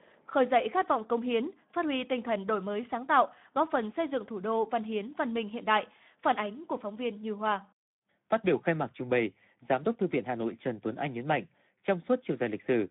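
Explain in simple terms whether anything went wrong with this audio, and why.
The Speex codec, an older internet-call speech codec, runs through the whole recording with too little data. That makes the speech hoarse and noisy. A narrow phone line only muffles it, and everything above 3.8 kHz is missing.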